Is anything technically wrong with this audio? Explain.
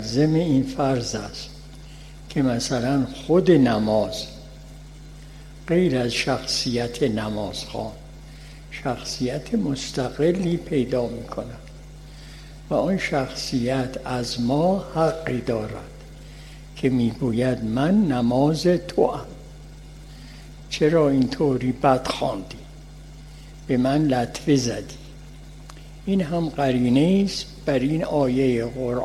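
No, nothing is technically wrong with this audio.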